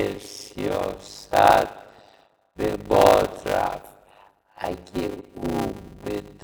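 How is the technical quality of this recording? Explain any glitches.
The recording has one clear fault, present throughout the speech: a block size mismatch (padded). One stage writes shorter blocks than the next stage reads, which fits 256-sample writes. The rest of each block is filled with zeros. That short gap repeats every block. It is heard as a buzz at 100 Hz. The speech also runs slower, at about 0.53 times normal speed.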